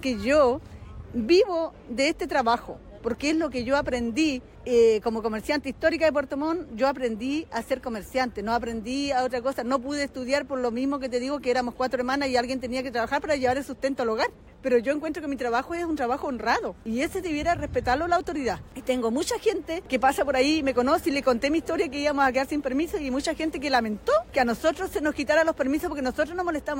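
Nothing in the audio stood out as a technical problem on listening.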